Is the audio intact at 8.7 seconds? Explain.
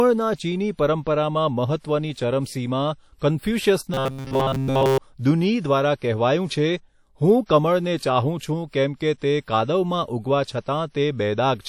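No. From 8.68 to 8.73 s there is pre-echo: a short hiss rises out of the quiet for about 58 ms before a sharp speech onset, which itself sounds softened. A transform codec spreads its quantisation error across a whole block, so noise scaled for the loud attack also fills the silence just ahead of it. Unlike a click or dropout, this is a smear that leads into the onset and stops where the onset begins.

Underneath this, the whole passage carries WMA compression damage, plainly audible as a ringing, washy texture with hiss that swells and fades with the level of the speech. This is likely the work of a Windows Media Audio encoder at a low bitrate, which fits roughly 48 kbps. Its long blocks leave noise drifting over tens of milliseconds and drop weak spectral lines, and that same block behaviour is what produces the pre-echo. Unlike a steady background hiss, this noise follows the speech.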